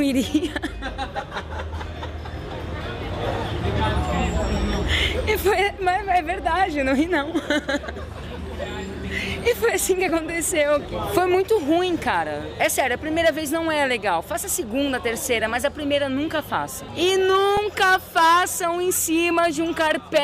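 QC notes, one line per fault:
10.09 s and 17.57 s, underrun with held sample: the output briefly ran dry and the converter froze on its last value, flattening the waveform for about 1.3 ms and 2.9 ms. The second gap fits a 128-sample buffer. Playback resumed where it stopped, so each gap ends softly.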